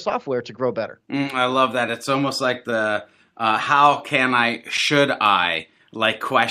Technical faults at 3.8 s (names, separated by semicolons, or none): clock drift between sender and receiver; repeated timing corrections